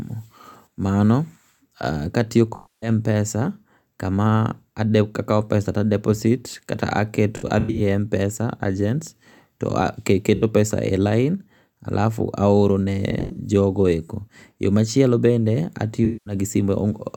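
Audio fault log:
2.55–2.89 s, 7.37–7.81 s, 10.35–10.43 s, 13.11–13.39 s, 16.05–16.34 s: AAC frame loss with concealment. Smeared, noisy, phasey patches (scattered at 7.37 and 13.11 s) where the decoder rebuilt lost frames from the last good spectrum.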